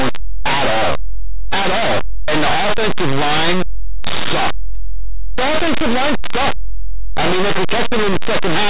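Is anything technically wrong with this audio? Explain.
Yes. Throughout, the speech carries very loud, harsh distortion. This is linear audio read as companded: plain 8-bit samples were expanded as mu-law codes, so values just on one side of zero became huge outputs, while those on the other side stayed small.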